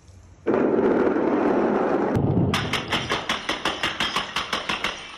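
No technical faults are audible.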